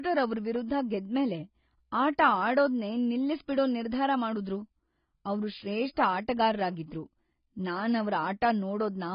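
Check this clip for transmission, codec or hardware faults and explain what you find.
One codec fault runs through the whole speech clip. Heavy AAC compression likely explains it: nothing survives above about 5.1 kHz, and sibilants sound smeared and warbling, which fits AAC-LC at around 16 kbps. Unlike a plain low-pass filter, it leaves fizzy, shifting holes in the spectrum.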